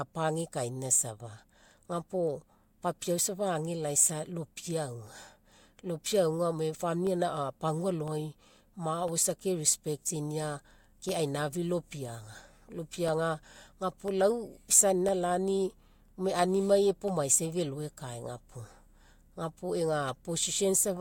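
Periodic USB or driver dropouts run from 0.06 s to 20.08 s, once every 1.0 s: something blocks the audio path, and each time about half a millisecond of speech is replaced by silence, heard as about twenty regular ticks riding on the speech.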